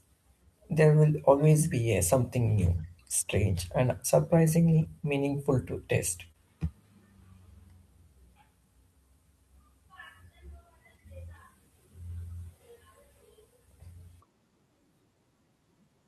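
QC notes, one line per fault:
2.61–2.67 s, 4.75–4.85 s and 6.23 s: lost packet rebuilt from error correction. Audio went missing in transit, which fits two, three and one 20 ms packets, but the following packets carried low-bitrate backup copies that the decoder played instead. There is no gap, but 40 ms, 60 ms and 20 ms of the speech come through coarser and noisier.
6.27–6.36 s: short concealed packet loss, twice back to back (6.27–6.32 s and 6.32–6.36 s). Here no backup copy arrived. Each time about 20 ms of audio was missing, and the decoder invented roughly 22 ms and 24 ms of fill by extending the preceding sound before blending back into the real signal. Coming just after the rebuilt patch at 6.23 s, this makes a brief smeared, wobbly stretch of speech.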